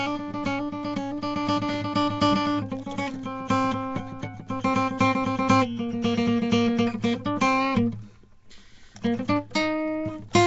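Nellymoser compression runs through the whole music clip, likely from the old Flash microphone codec. It codes short blocks at a fixed bit budget, which fits a 32 kbps stream, and fills starved bands with noise. The result is a rough, hissy, smeared sound with nothing above 7.8 kHz.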